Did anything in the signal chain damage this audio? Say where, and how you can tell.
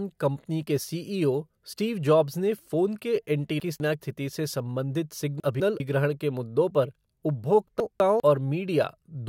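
Yes: chunks out of order at 3.6–4.0 s (after "जॉब्स ने फ़ोन के"), 5.4–5.8 s (before "के मुद्दों पर") and 7.8–8.2 s. Each time a 200 ms block plays one slot late, so speech briefly jumbles at the hard joins, pointing to buffer or packet reordering.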